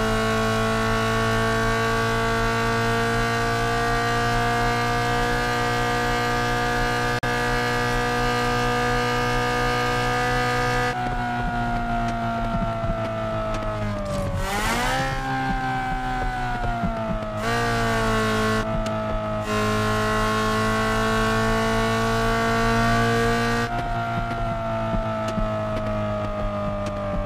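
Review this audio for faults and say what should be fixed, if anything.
A Bluetooth dropout, likely, cuts the sound to silence from 7.19 to 7.24 s, about two lost frames; playback resumes further along, as if it had continued. Keep the headphones close to the source and away from Wi-Fi congestion.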